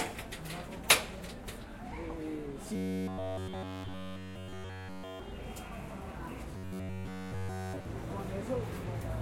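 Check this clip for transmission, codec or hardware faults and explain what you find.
One fault appears twice, from 2.76 to 5.20 s and from 6.57 to 7.85 s: robotic sound from repeated short buffers. The likely cause is a starved stream looping a roughly 10.7 ms segment, which imposes a rigid, metallic 93.8 Hz buzz on the sound.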